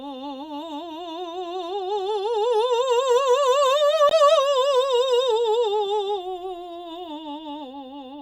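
At 4.09 to 4.11 s the music drops into a hard-edged hole of about 20 ms, an abrupt click-like dropout with nothing missing on either side. This is a gap between stream segments: the boundary of 4-second segments left 18.5 ms unaccounted for, and the player filled it with silence.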